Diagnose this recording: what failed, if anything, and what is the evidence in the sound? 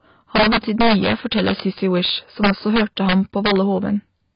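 Integer overflow in the sample-format conversion or gain stage runs through the whole speech clip. On the loudest moments, the waveform cracks instead of flattening. The signal was driven about 6 dB past the integer limit, and the few percent of samples that exceeded it wrapped to the opposite sign instead of being clamped. Each wrapped peak swings across the full range, which produces sharp cracks far more abrupt than ordinary clipping.

The band is also cut off throughout, with nothing above 5.2 kHz, and the speech has the heavy dullness, smearing and warbly texture of a low-rate codec. The likely cause is AAC compression, AAC-LC at a rate that fits roughly 16 kbps. At that rate the encoder lowers its cut-off and quantises the spectral lines coarsely against its hearing model. It leaves gaps or substitute noise in the bands, which smears sibilants and sustained sounds.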